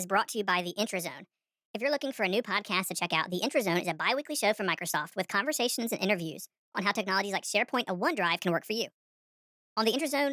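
Throughout the clip, the samples are clocked out faster than they were captured, with no rate conversion in between. This is a wrong sample rate fault, and the mismatch fits audio recorded near 22 kHz being played at 32 kHz. Speed and pitch rise together by a factor of 1.45, roughly six and a half semitones, so the speech runs hurried and sounds high and thin from start to finish.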